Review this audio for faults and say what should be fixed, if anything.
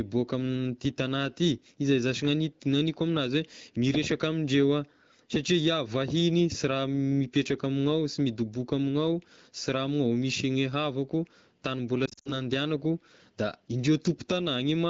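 From 12.05 to 12.41 s the speech warbles and drops out in patches up to 60 ms long. These are lost AMR speech frames, which the decoder covered with fading repeats of earlier settings.

Prevent this with a stronger radio link or better channel error protection, so fewer frames fail their checksum.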